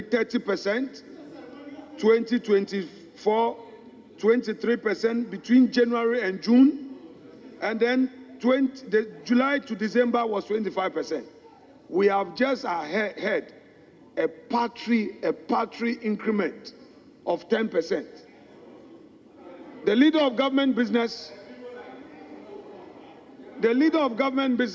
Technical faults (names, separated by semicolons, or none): none